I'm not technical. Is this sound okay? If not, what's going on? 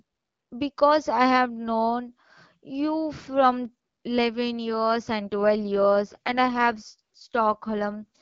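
No. An AMR rate drop starts at about 5.27 s and runs to the end of the clip. This is HD Voice phone speech, and on a weak radio connection the network has told the phone's codec to use fewer bits for the voice itself and spend the rest on protecting the signal from errors. The voice doesn't cut out or turn muffled, but from that point it sounds rougher and more artificial, a bit buzzy and robotic.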